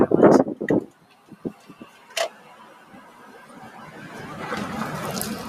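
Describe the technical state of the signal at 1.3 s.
At 1.3 s the signal sits inside a stretch of sound cut by the noise suppressor, running from 0.9 to 2.1 s. A suppressor tuned for speech has judged this sustained material to be noise and pulled it down harder than its surroundings, by about 8 dB at the deepest point. Across about a second of that span, held portions sag and their decay is clipped short, while sharper onsets still come through with more of their level.

This sits within a wider fault, a noise suppressor applied to music or sounds, present across the whole clip. Because the processor treats steady tones, ambience and reverberant tails as noise to be removed, its gain keeps shifting, with level swings of around 15 dB. At 1.3 s that appears as pumping, fluttering or thinning of the sustained content, and tails that vanish early instead of fading naturally.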